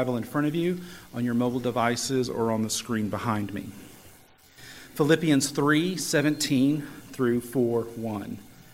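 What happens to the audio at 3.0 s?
A clock-matching process likely applied a drift correction step, slowing playback about 5.4% from 1.79 to 3.42 s, so the sound drops nearly a semitone before snapping back.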